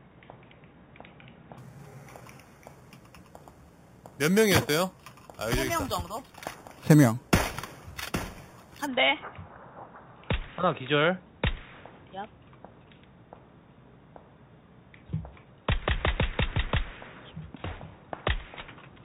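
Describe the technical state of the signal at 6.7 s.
At 6.7 s the signal is inside a stretch of imaging from sample-and-hold upsampling running from 1.58 to 8.87 s. Material at an 8 kHz rate was raised to 48 kHz by repeating each sample, so mirrored spectra sit unfiltered above 4 kHz, the first filling 4 to 8 kHz at about 15 dB below the signal. It sounds like a metallic fizz tracking the level. A spectrogram shows inverted copies of the low band stacked upward, and the waveform zoomed in shows staircase steps.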